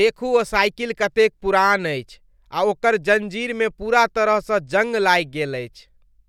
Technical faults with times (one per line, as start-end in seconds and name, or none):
none